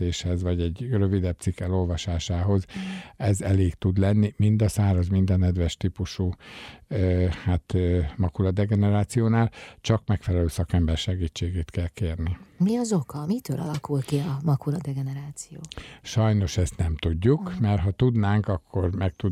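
No technical faults can be heard anywhere in the recording.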